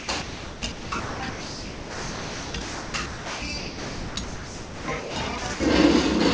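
From 0.0 to 5.6 s the sound is chopped by the voice detector, likely through repeated send/stop switching, with roughly 4.3 s swapped for comfort noise, over a band-limited path with nothing above 8 kHz.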